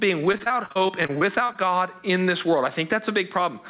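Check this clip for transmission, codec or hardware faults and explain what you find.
Two faults stand out in this speech: gain pumping throughout, and a burst of repeated packet loss early on. The audio came through a call path, and nothing above 4 kHz survives, which points to a narrowband codec such as G.711.

Gain pumping runs through the whole clip. The likely cause is input gain set far too high with a fast limiter or compressor clamping it on every loud syllable. The level swings by roughly 10 dB, so loud and quiet passages sit unnaturally close together. Unlike a noise gate, which cuts the pauses to silence, this squashes loud and soft parts together.

Repeated packet loss (robotic sound) runs from 0.32 to 1.56 s, with 13 short holes, the longest about 42 ms, covering nearly a quarter of that span. Each missing piece is patched by stretching the preceding sound, and the next hole comes before the speech recovers. 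The result is choppy speech with fragments missing. A single dropout would be one isolated break, but here the gaps recur in quick succession.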